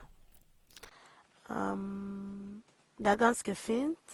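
Repeated lossy re-encoding, likely about seven passes through a chain consistent with 48 kbit/s Opus, causes generation loss: the speech sounds swirly, smeared and hollow from the start, with blurred attacks. At 0.89 s the input switches to a poorer device, probably a different microphone or headset. After a 20 ms gap the band stops at 11.4 kHz, the level drops about 5 dB and new noise appears roughly 35 dB down.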